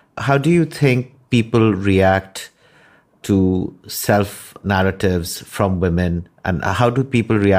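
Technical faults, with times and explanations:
Nothing stood out as a technical problem on listening to this speech recording.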